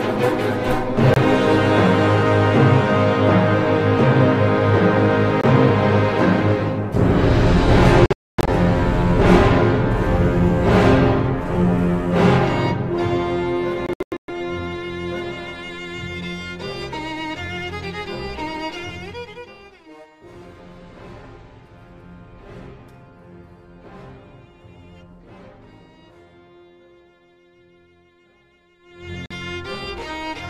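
Short gaps of silence at 1.14 s and 5.41 s, each about 23 ms, are likely Bluetooth dropouts where packets arrived too late and were discarded. Clusters of gaps follow from 8.06 to 8.49 s and from 13.86 to 14.30 s, and the sound resumes each time as if it had kept playing. From 28.79 to 29.14 s, zipper noise rides on a level change of roughly 25 dB, applied in 2 dB steps about 40 times a second, which produces a fast ticking. A further dropout of about 46 ms follows at 29.26 s.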